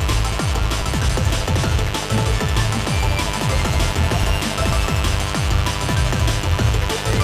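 Mains buzz runs throughout: sharp 50 Hz switching spikes leak in twice per cycle, spraying harmonics into kilohertz, a raspy buzz roughly 10 dB below the sound. Periodic USB or driver dropouts recur every 0.49 s from 0.32 to 7.17 s; a blocked bus skips around 10 ms each time, giving regular ticks.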